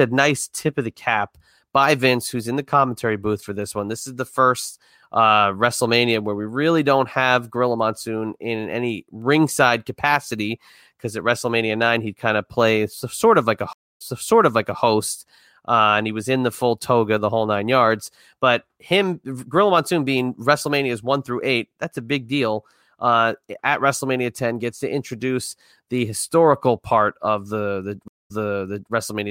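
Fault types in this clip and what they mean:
Stream reconnect: the connection dropped, so the player stalled, re-established the link and restarted its decoder partway through the stream, with the server resending a chunk it had already delivered. In this speech the audio cuts to silence for 270 ms at 13.73 s and 215 ms at 28.08 s. Each time it resumes at an earlier point, repeating about 0.81 s and 0.63 s respectively, with a brief muted or faded onset as the fresh decoder starts.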